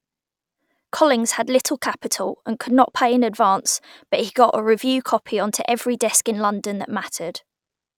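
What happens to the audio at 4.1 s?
Nothing goes wrong at 4.1 s; the speech runs on intact through that moment.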